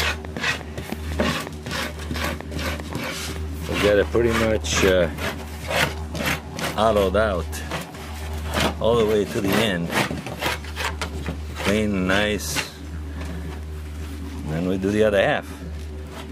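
A train of clicks runs from 0.03 to 4.04 s: around twenty uneven ticks, 5.5 per second, standing well above the sound, likely from electrical interference.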